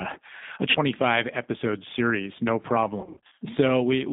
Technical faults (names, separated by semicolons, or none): G.729 codec; VoIP packet loss concealed by the speech codec